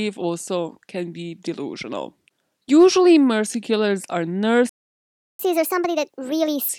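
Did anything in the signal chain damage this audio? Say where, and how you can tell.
Yes. Right after "mercy killers are", the speech cuts to silence from 4.69 to 5.39 s, a gap of about 0.7 s, then resumes. This is a playback stall at the player stage, likely its buffer running dry or its output thread being blocked.

From 5.39 to 6.69 s the speech runs fast and sounds higher, at 1.5 times normal speed and roughly seven semitones up. This is catch-up at higher speed: the player resamples its backlog to recover lost time, so pitch rises along with tempo.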